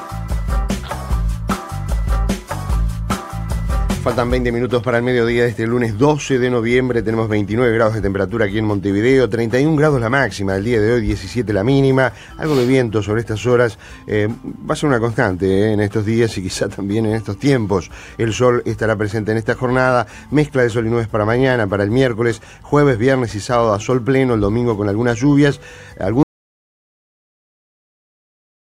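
The input feed to the recorder was most likely lost, through a disconnected device, a failed link or a mute, while the recording itself kept running and writing silence. The result is an audio dropout to silence at 26.23 s: the sound cuts off abruptly in mid-flow and never returns, leaving about 2.5 s of complete silence to the end of the file, with no room tone or noise floor underneath. Whatever followed that point is gone.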